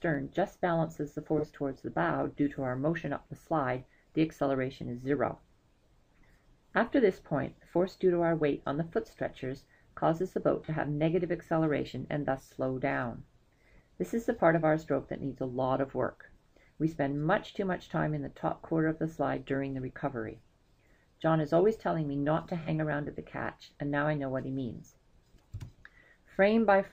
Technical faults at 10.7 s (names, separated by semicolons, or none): AAC frame loss with concealment